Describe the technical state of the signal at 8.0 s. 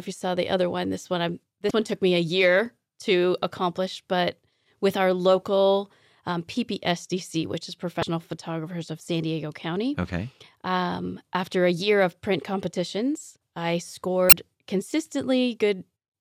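Right at 8.00 to 8.03 s, just after "which is", there's damaged data in the compressed stream. Corrupted bytes make the decoder misread the frames and lose sync while it hunts for the next frame header, so you hear a brief chirp, squawk, click or short hole.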